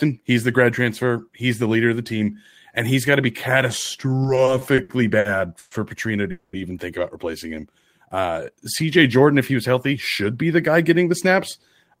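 From 4.23 to 5.73 s the speech shows repeated stalls (stutter). Packets kept arriving late, and the jitter buffer ran dry eight times. The receiver stretched the last sound across each gap, 330 ms in total with the longest at 120 ms. Nothing is lost, but the delivery drags and catches.

At 6.31 s a call audio freeze holds the sound for 220 ms, ending at 6.55 s. It is a held, fading continuation rather than silence, and speech then resumes where it stopped. The likely cause is packets held up in transit, leaving the buffer empty and adding 220 ms of delay.

Between 7.48 and 8.34 s a jitter buffer slow-down plays the speech at 89% speed with its pitch unchanged. To rebuild its reserve, the receiver repeated single pitch periods and pause fragments, adding 103 ms. Sounds come out drawn out, with a slight warble in places.

From 10.25 to 11.31 s a jitter buffer speed-up runs the speech at 107% speed at the same pitch. 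The buffer was holding more than its target, so the receiver trimmed short pitch-period pieces, removing about 70 ms. The result sounds somewhat hurried.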